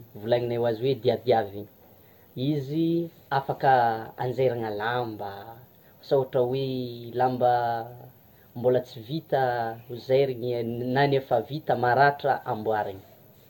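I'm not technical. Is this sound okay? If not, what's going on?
No. The speech has generation loss from start to finish: it sounds swirly, hollow and smeared, with blurred consonant starts and nothing above 17 kHz. That likely comes from being compressed and decompressed around ten times, each pass adding fresh damage.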